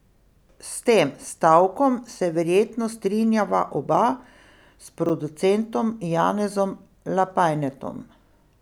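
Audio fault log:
5.06–5.10 s, chunks out of order: one 10 ms chunk of the speech turns up three chunks late and plays after the 30 ms that should follow it. Nothing's missing, but the reshuffle leaves three hard joins, so you get a quick jumbled blip.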